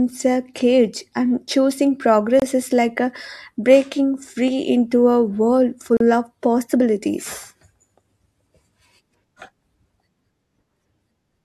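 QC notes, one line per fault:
2.40–2.42 s: gap at a join of encoded pieces. A 24 ms silence breaks the speech because encoder start delay and last-frame padding were left in. The edges are smeared.
5.97–6.00 s: gap at a join of encoded pieces. The same untrimmed join leaves a 36 ms dropout, and the speech resumes where it stopped.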